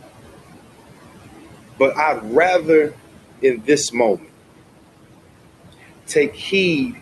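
Speech runs through a noise suppressor, with room noise about 15 dB below the voice. Noise suppressor artifacts are present throughout: background sinks by about 16 dB between phrases, leaving a residue. Speech is cut by the noise suppressor from 3.42 to 3.68 s and from 4.17 to 4.29 s. Quiet speech sounds were mistaken for noise and pulled down by about 14 and 16 dB, so they sound swallowed. The call codec path limits the top end near 12 kHz, consistent with Opus at a moderate bitrate.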